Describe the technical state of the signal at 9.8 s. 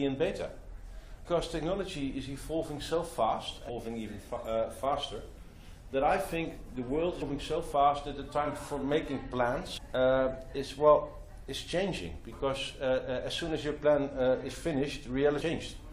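Damaged data in a compressed stream occurs from 9.76 to 9.78 s, a 20 ms span. Part of the encoded data there is corrupt, so the decoder cannot read those frames properly. It loses its place in the bitstream and hunts for the next valid frame header before normal decoding resumes. What gets through is a short, harsh blip, a brief chirp or squawk that breaks sharply from the surrounding sound.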